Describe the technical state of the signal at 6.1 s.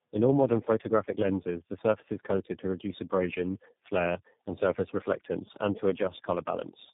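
At 6.1 s the speech carries tandem speech coding, present for the whole clip. It sounds like three low-rate speech codecs in series, each re-encoding the previous one's degraded output, so the speech is rough, muffled and warbly, with nothing above 3.8 kHz.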